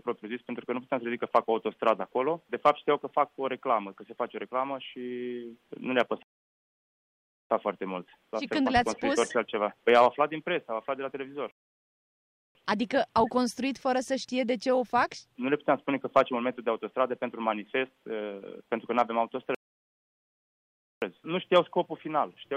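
Playback freezes into silence three times, at 6.23 to 7.50 s, 11.51 to 12.55 s and 19.55 to 21.02 s, then picks up exactly where it stopped. These are rebuffering stalls, where the player ran out of downloaded audio and waited, adding about 1.3, 1.0 and 1.5 s without losing any sound.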